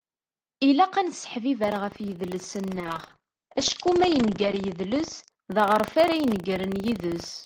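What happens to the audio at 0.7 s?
Nothing goes wrong at 0.7 s; the speech plays through that moment intact, with no dropout, glitch or distortion.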